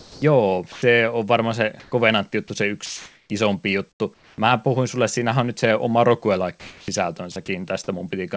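A voice detector at the sending end of a call path appears to have misjudged parts of this speech recording, and the resulting gaps were filled with comfort noise. The path itself carries nothing above 8 kHz, which fits a wideband codec such as G.722 at 64 kbps.

The first fault is sound dropped by the voice detector, likely because quiet onsets and word edges were classed as background and transmission stopped. At 0.00 to 0.22 s, 0.72 to 0.82 s, 2.48 to 2.50 s and 6.60 to 6.88 s, the speech gives way to steady noise. Roughly 180, 100, 20 and 140 ms of actual speech are lost, and the speech returns when the detector triggers again.

Between phrases, comfort noise in place of the background occurs at 1.80 to 1.92 s, 2.86 to 3.30 s and 3.92 to 4.38 s. The real room tone is swapped for a flat, featureless hiss. In the first two stretches the background sits about 40 to 44 dB below the loud parts, and the synthetic fill shifts the level by about 5 dB and then about 2 dB.

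Finally, sound chopped by the voice detector appears at 7.32 to 7.48 s. The detector likely flips on and off within this short stretch and patches about 60 ms with fill, which makes the speech choppy.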